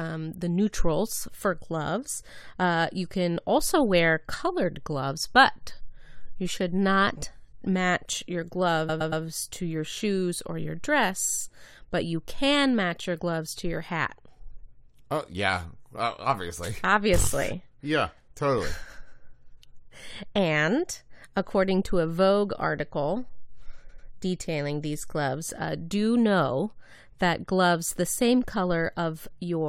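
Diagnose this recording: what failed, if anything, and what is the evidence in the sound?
Repeated frames at 8.88–9.23 s and 23.88–24.07 s, a codec or storage fault: the speech stutters as a 116 ms block replays three extra times, then a 93 ms block twice more. The audio runs about 0.35 s and 0.19 s longer.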